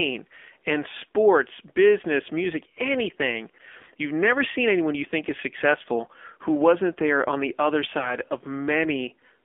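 Speech squeezed through AMR narrowband mobile coding, confined to roughly 250 Hz to 3.5 kHz and audibly buzzy and synthetic, which fits a low rate around 7.4 kbps. After "there on the other", from 7.98 to 8.16 s, AMR bit errors turn it hoarse and gargly, pointing to about five frames with a few percent of flipped bits.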